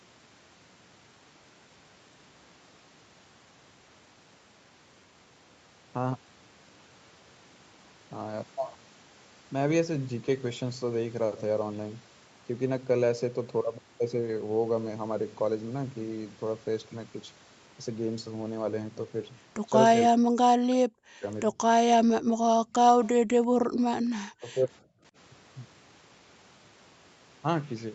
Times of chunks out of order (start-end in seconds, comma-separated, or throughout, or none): none